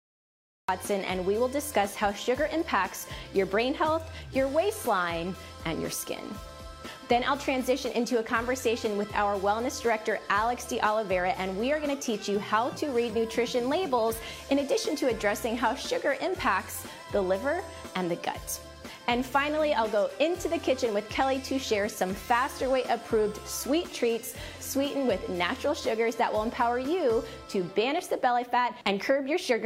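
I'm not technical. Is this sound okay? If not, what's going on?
No. Cut-off start at 0.69 s: the recording began late, so after brief silence the sound jumps in mid-way, with no natural beginning or fade-in.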